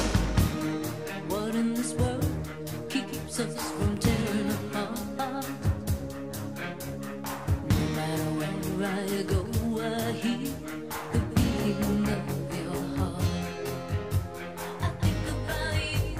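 From 12.14 s to the end, channel delay causes comb filtering. One channel lags by roughly 20 ms before the two are summed to mono. Shared content cancels at evenly spaced frequencies, starting down around 20 Hz. The sound turns rough and slightly doubled.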